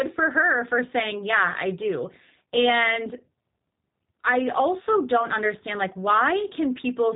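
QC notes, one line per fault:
Throughout, G.729 codec: the speech comes through intelligible but plainly rough and slightly synthetic. Each 10 ms frame is rebuilt from a vocal tract filter, a pitch predictor and a few pulses, not the original waveform, and that sparse rebuild fits an 8 kbit/s G.729A-style coder. On a spectrogram, energy stops sharply at 3.8 kHz with nothing above it.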